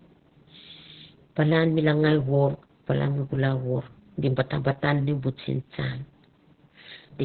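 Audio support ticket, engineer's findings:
Opus voice compression, whole clip. Speech muffled, hoarse, a bit robotic; nothing above about 4.3 kHz. Points to the SILK coder squeezed down to narrowband, with the excitation coded coarsely. Damage is heavy, which fits a very low setting around 8 kbps.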